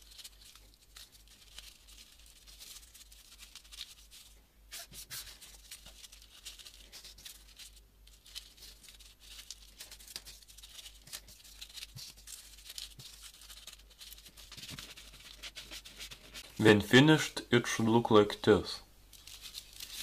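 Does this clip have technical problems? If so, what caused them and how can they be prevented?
Yes. Periodic USB or driver dropouts produce a short tick roughly every 2.0 s from 10.70 s to 18.68 s, about five in all. Each time, a background task stalls the USB bus or audio driver and a couple of milliseconds of audio are simply skipped, splicing the waveform into a click. Unlike random glitches, these are evenly spaced and heard only while sound is present. Prevent them by stopping the offending background process or updating the driver.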